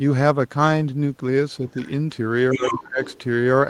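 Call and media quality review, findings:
Other side's voice leaking through: faint far-end voice at 1.69–1.90 s, fairly strong at 2.51–2.76 s, low at 3.04–3.18 s. Likely residual loudspeaker echo the echo canceller failed to remove.

Speech suppressed in double talk: near-end speech ducks deeply, around 25 dB at worst, from 2.53 to 3.00 s, about half a second, overlapping far-end audio. Likely echo canceller attenuating both talkers during overlap.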